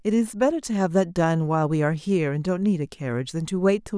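No technical faults can be heard anywhere in the recording.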